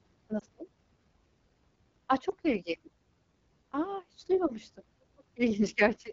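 Speech carried over the AMR wideband (HD Voice) codec, and the coding damage is plainly audible throughout: the sound is rough and raspy, which fits one of its lowest modes, around 8.85 kbit/s. On a spectrogram, energy stops at 7 kHz, with the 6.4 to 7 kHz band showing smooth, noise-like fill rather than harmonic detail. Lost AMR speech frames cause two brief dips or warbles, at 0.39 to 0.43 s and again at 2.29 to 2.33 s. Each sounds like a single dropped 20 ms frame that the decoder papered over by repeating the previous pitch and vocal-tract settings at reduced gain. In the waveform these show as short amplitude sags, and on a spectrogram as a momentary smearing of the harmonics.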